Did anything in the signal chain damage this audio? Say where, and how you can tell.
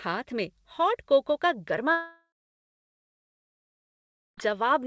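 Yes, at the network stage. From 1.92 to 4.39 s, a short fading buzz gives way to 2.1 s of silence. That is likely a long network dropout, with the lost audio never played.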